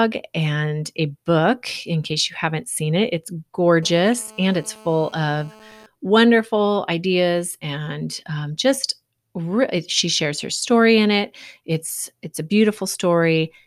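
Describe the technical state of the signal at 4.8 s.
GSM phone buzz covers 3.83 to 5.86 s, ending before "wonderful ideas and um". Rectified 217 Hz call bursts give a steady rasp about 26 dB down, seen as evenly stacked harmonic lines.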